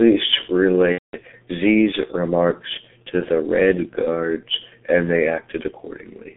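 G.723.1 codec damage runs through the whole clip. This early internet-telephony coder models speech in 30 ms frames at a very low rate; the heavy smearing fits a 6.3 kbit/s mode. The line band here is limited to roughly 200 Hz to 3.5 kHz, so the speech sounds muffled and thin. Because the vocal model is refreshed only once per frame, the voice takes on a hoarse, grainy edge and consonants blur together.

VoIP packet loss concealed by the speech codec occurs from 0.92 to 1.15 s. Data went missing for about 210 ms, which fits seven lost 30 ms frames. During the gap the decoder kept rebuilding sound from the last pitch and filter it had received, turning it down frame by frame. The result is a drawn-out, fading tone or coloured noise instead of real speech, muted from the third lost frame on, with some lingering weakness just after normal packets resume.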